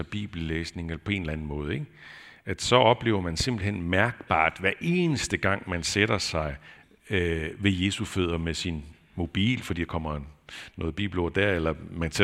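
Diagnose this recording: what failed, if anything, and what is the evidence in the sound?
Nothing failed in this recording.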